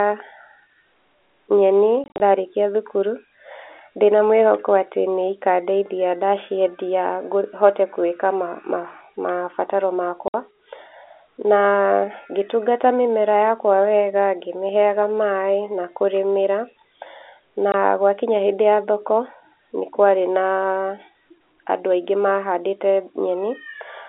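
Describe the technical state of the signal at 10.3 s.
At 10.3 s the speech drops out for 60 ms, from 10.28 to 10.34 s, because of packet loss filled with silence. The receiver had nothing to decode for that stretch and inserted digital silence, a gap length that fits three 20 ms packets. The signal cuts off abruptly and resumes just as abruptly, leaving hard edges around a dead hole. The narrow telephone band of the G.711 line is audible on either side of the gap.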